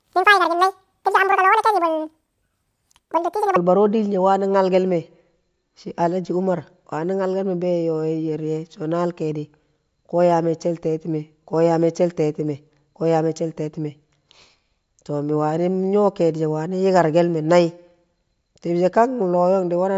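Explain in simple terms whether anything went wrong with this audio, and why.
For the first 3.56 seconds, the speech has a wrong sample rate. It runs twice as fast and sounds a full octave higher, like a chipmunk, which fits audio recorded at 16 kHz being played back at 32 kHz. Speed and pitch rise together by exactly the same amount. A pitch-shift fault would raise the voice but keep normal timing, and a time-stretch fault would speed it up without changing the pitch.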